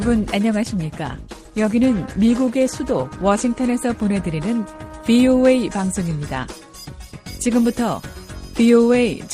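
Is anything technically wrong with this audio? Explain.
Yes. A call bitrate drop runs from 0.64 to 5.31 s. The call's bandwidth estimate fell, so the encoder coded more coarsely and trimmed the highs. The sound turns rough and muffled, worst for about 2.35 s, which fits a fall from 48 to 15 kbps.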